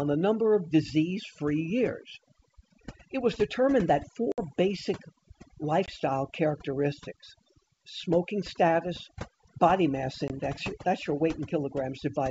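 From the start and all the way through, there's overdone noise removal. The noise reduction was pushed too hard, so individual frequency bands get cut right down whenever they sit near what the tool thinks is noise, and the quieter parts of the speech get dragged out with them. The background drops and breaks up into little twinkling specks.

Then there's packet loss on an ADPCM call, three times. The big one runs from 4.32 to 4.49 s: about 60 ms of audio, a few packets' worth, swapped for silence. Shorter 20 ms dropouts, about one packet each, hit at 5.86 to 5.91 s and 10.28 to 10.31 s. Each gap is a hard-edged hole. Since the decoder's predictor and step size drift out of step with the sender's, the speech comes back with a bit of distortion, then settles within some tens of milliseconds.

Underneath all that, the G.722 wideband coding itself sounds clean, with clear speech up to about 7 kHz and just a faint hiss on top, which fits the full 64 kbit/s mode.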